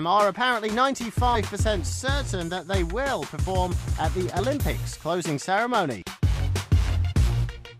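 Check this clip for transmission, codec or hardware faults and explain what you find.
One fault recurs: compressed frames skipped, at 1.34–1.36 s, 4.38–4.40 s and 7.11–7.13 s. Whole frames never reached playback, so the audio jumps ahead by roughly 70 ms, 100 ms and 50 ms, which points to about three, four and two frames lost. Each join is a brief blip or click.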